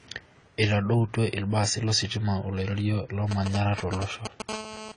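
Speech, dull and smeared throughout. Nothing remains above 10 kHz, and the codec damage is plainly audible, with a warbling, fizzy texture on sibilants. The likely cause is AAC compression, AAC-LC at a low bitrate, which fits about 24 kbps. Too few bits force a lowered cut-off and a coarsely quantised spectrum. From 3.31 to 4.49 s come GSM signalling bursts. A nearby 2G phone is exchanging short radio bursts with the network, and the audio circuit rectifies them. They gallop as a dit-dit-dit of brief 217 Hz buzzes, roughly 5 dB below the speech. At 4.49 s this becomes a steady GSM phone buzz, lasting to 4.92 s. The phone has entered a call and now transmits continuously at 217 bursts a second. The result is a hard, raspy 217 Hz buzz, rich in harmonics, about 10 dB below the speech.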